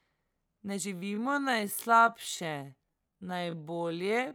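Speech with a time-stretched section from 0.91 s to the end at 4.35 s, where the pace abruptly drops to about 0.58 times normal while pitch holds steady. The likely cause is software lengthening the audio by repeating short segments.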